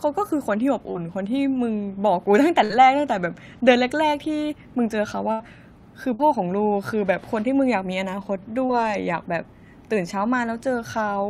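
At 0.91 to 1.00 s there is a short concealed packet loss. About 40 ms of speech never arrived in time. The decoder bridged the hole with 37 ms of sound carried on from what came before, then rejoined the real signal. The join adds a few milliseconds. It is heard as a quick smear or wobble. The same fault returns at 8.66 to 8.72 s. There 40 ms went missing and 31 ms were filled in.

At 2.64 to 2.72 s comes a burst of packet loss. About 60 ms were lost in a row. The receiver stretched the last sound over the gap, fading it down. The speech then resumes further on. The part in between is gone. A second burst at 5.32 to 5.42 s drops about 80 ms, all of it filled. A third at 6.14 to 6.28 s loses 60 ms. Only 53 ms are filled, and 7 ms are added. Each burst sounds like a brief held buzz or fading hiss, followed by a jump.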